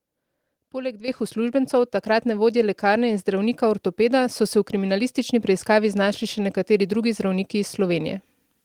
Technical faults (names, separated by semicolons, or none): microphone volume stepped up